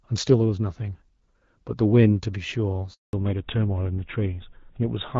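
At 2.93 s the call switches networks, and no speech frames arrive while the link changes over. The speech dies away almost at once and stays silent for about 200 ms until 3.13 s: a handover gap, with whatever was said in that span lost.

From 3.13 s to the end, the call falls back from the wideband HD Voice path, which sounds like AMR-WB at about 12.65 kbit/s, to a narrowband codec consistent with GSM full rate. This fallback to narrowband strips everything above 4 kHz, so the speech turns duller and rougher.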